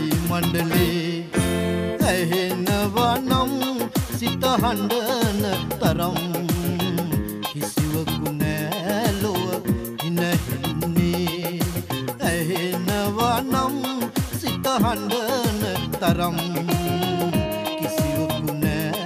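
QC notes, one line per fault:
No technical faults were heard anywhere in the clip. Nothing in it calls for a repair or a second pass.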